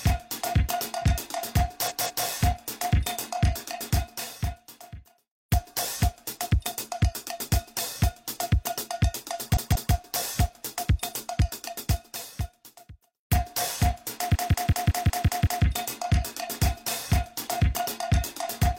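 At 1.86 to 2.23 s and 9.52 to 9.90 s, repeated frames: a 186 ms block, consistent with four compressed frames, plays twice more, stuttering. At 14.31 to 15.61 s the same-sized block repeats seven extra times, adding 1.3 s.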